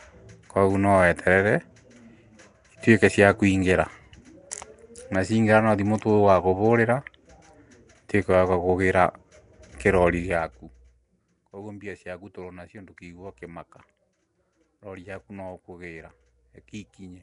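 From start to finish the speech carries a rough, hissy halo and a smeared, underwater quality, with plainly audible coding damage and nothing above about 10.6 kHz. This points to Nellymoser compression, most likely Flash's Nellymoser Asao microphone codec at a rate that fits about 44 kbps. It codes each 256-sample block with a fixed two bits per sample, so weak bands receive no bits and are filled with noise, producing the hiss and smearing.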